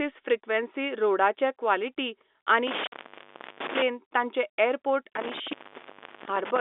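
This speech clip, carried over G.711 telephone coding with its band limited to roughly 250 Hz to 3.6 kHz, suffers an intermittent contact twice: from 2.67 to 3.82 s and from 5.16 to 6.59 s, each with a dropout of about 0.7 s. On the waveform these show as sudden collapses to near-flat hiss bracketed by crackly spikes. On the spectrogram they appear as faint broadband noise bands. Within the first contact fault, packet loss filled with silence removes 50 ms at 2.87 to 2.92 s, which fits five lost 10 ms packets. This leaves a hard-edged, fully blank slot, visible as a clean vertical gap.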